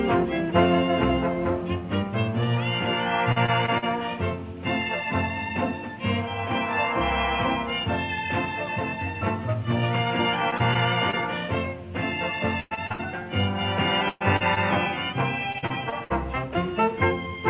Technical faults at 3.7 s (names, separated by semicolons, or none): repeated packet loss (robotic sound)